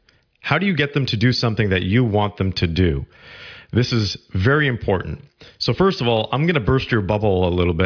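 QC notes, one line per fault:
No technical faults are present in the signal.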